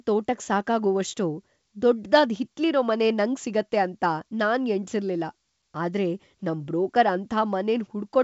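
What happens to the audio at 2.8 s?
Nothing goes wrong at 2.8 s: the speech carries on intact through that moment, with only the ordinary 7 kHz top end of a wideband call.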